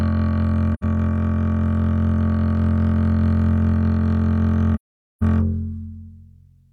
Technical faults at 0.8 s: AAC frame loss with muting

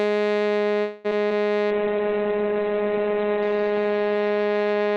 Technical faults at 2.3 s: call bitrate drop

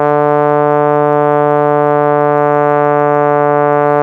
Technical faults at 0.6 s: none

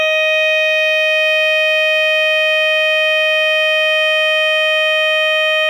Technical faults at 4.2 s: none

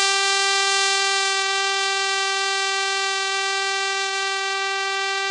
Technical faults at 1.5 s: Vorbis compression

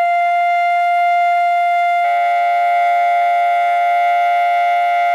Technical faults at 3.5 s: periodic clock jitter

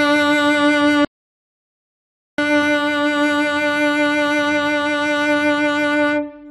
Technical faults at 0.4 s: none

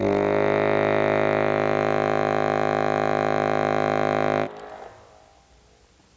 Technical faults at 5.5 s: gain pumping

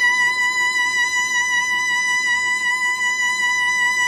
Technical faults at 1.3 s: Vorbis compression

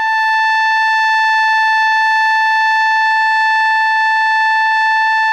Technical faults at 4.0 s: none

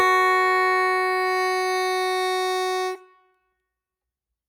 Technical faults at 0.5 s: noise suppressor applied to music or sounds

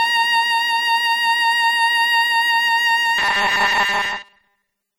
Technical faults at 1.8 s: MP3 compression

